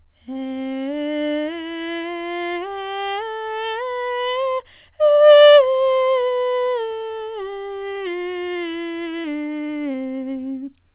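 From 6.66 to 7.54 s, repeated packet loss (robotic sound): packets kept arriving late or not at all, each gap up to 22 ms patched by stretching the preceding music, so this stretch turns choppy, with about 13% of it filled in. Two short concealed packet losses follow, at 9.22 to 9.26 s and 9.92 to 9.96 s. Each time, about 20 ms of audio failed to reach the decoder and was bridged by extending the last sound, heard as a brief smear or wobble within the music. That music sits behind a telephone-band call codec, consistent with G.711, with nothing above 4 kHz.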